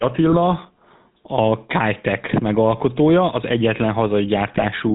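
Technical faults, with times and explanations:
Throughout: GSM full-rate codec. Speech is rebuilt from a vocal-tract model driven by coarse regular pulses, giving a plainly audible buzzy, gravelly roughness and nothing above 4 kHz.
0.32–0.37 s and 4.54–4.68 s: GSM bit errors. Corrupted filter, pitch or gain values distort the spectrum and level for those frames, breaking the speech into squawks and gargling.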